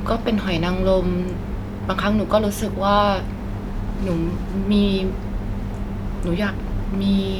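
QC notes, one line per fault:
No faults heard.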